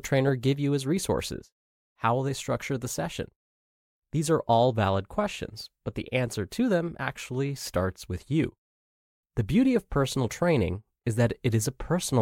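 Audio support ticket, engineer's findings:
Listened through the speech recording and nothing stood out as a fault.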